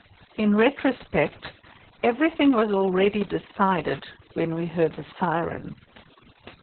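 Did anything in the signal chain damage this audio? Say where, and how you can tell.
Yes. Throughout the clip, the background sinks to near silence dotted with twinkling specks. This is overdone noise removal at the call-processing stage, cutting frequency bands whenever they sit near its noise estimate.

Throughout, the speech is also muffled, hoarse and faintly robotic, with nothing above 4.3 kHz. The codec stage caused this: Opus voice compression in narrowband SILK mode, coding coarsely at a bitrate that fits about 6 kbps.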